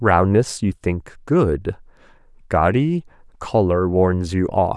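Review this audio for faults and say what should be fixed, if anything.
No faults turn up anywhere in this speech recording. Nothing needs to be fixed.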